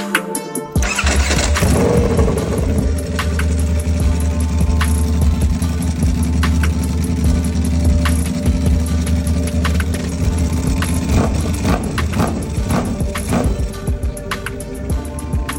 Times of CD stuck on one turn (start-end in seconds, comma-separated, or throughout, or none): none